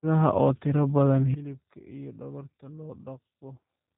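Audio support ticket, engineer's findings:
Speech throughout rough, slightly synthetic, nothing above 3.8 kHz. G.729 codec damage, plainly audible, consistent with 8 kbit/s G.729A rebuilding each frame from filter, pitch predictor and sparse pulses.

Sudden gain jump at 1.34 s, right after "oo tiro badan oo": speech and background drop together by about 17 dB and stay down to end. Likely a gain change applied without a ramp.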